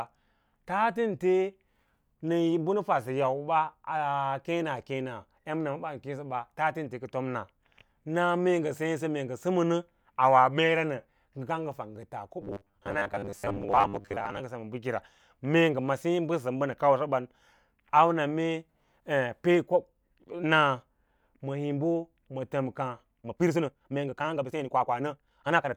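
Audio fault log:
12.42–14.40 s: robotic sound from repeated short buffers. The speech turns into a stiff, metallic buzz that still loosely tracks the words. A steady 100 Hz tone sits over the voice, regardless of its natural pitch. That rate fits a 10 ms piece of audio being played again and again. About half the sound here seems to be such repeats. The likely cause is new audio arriving too late, with the software looping the last buffer while real audio was skipped.
23.15–25.77 s: time-stretched section. The pace jumps up abruptly to about 1.55 times normal speed, running to the end. The pitch does not rise with it. The speech sounds choppy and rushed, with small jumps where short slices were cut out. That pattern likely comes from software squeezing this stretch into a shorter length, dropping brief pieces to keep the pitch unchanged.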